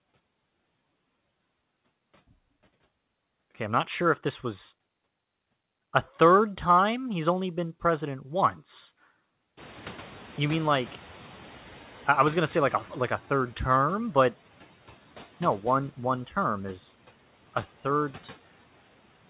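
Noise suppressor catching up, from 9.57 to 13.21 s, in this speech clip: at around 9.5 s the room noise jumps by about 20 dB, and the suppressor's noise estimate, still tuned to the quieter background, lets the louder noise through with too little reduction. Over roughly 3.6 s the estimate adapts and the noise sinks by about 7 dB, settling about 23 dB under the speech. Throughout, nothing is heard above 4 kHz, which fits a narrowband G.711 call path.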